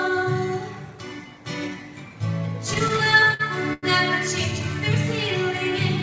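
From 2.74 to 3.85 s the audio drags and stutters through nine short stalls, the longest 95 ms, as a starved jitter buffer repeatedly stretched the last sound, all of it cut off above 8 kHz.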